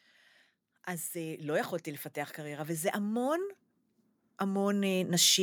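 From 2.35 to 3.59 s, and again from 4.38 to 5.19 s, automatic gain rising lifts the level by about 5 dB, then about 4 dB, as the gain control judges the input too quiet. Speech and background swell together, and the waveform envelope ramps upward while the spectrogram brightens uniformly across all frequencies.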